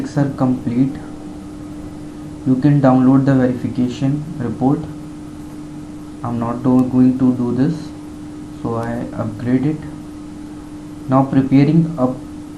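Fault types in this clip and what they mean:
Bit error spike: a flipped bit in a stored or transmitted sample makes the value leap by a power of two and snap straight back. Here that's two sharp broadband ticks, at 6.79 s and 8.83 s, peaking around -10 dBFS and -16 dBFS.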